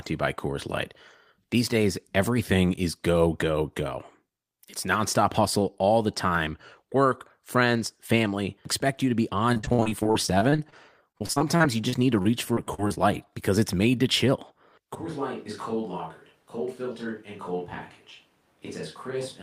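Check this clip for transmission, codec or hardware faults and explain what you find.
Two kinds of fault are present: repeated packet loss in two stretches, and a switch to a distant microphone near the end.

From 9.53 to 10.74 s, just after "expect you to be", and again from 11.12 to 12.98 s, there is repeated packet loss (robotic sound). Packets kept dropping, and each hole was patched by stretching the preceding sound. The result is choppy audio with pieces missing. The first stretch has 16 gaps of up to 57 ms, and the second has 12 of up to 37 ms.

From 14.95 s, right after "it's made to chill", through to the end, the pickup likely switches to a distant microphone after the close one drops out. The sound turns suddenly hollow and roomy, with thinner bass. It is roughly 10 dB quieter, and room noise sits roughly 30 dB below the speech.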